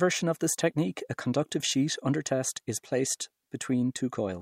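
Speech, with nothing technically wrong with it.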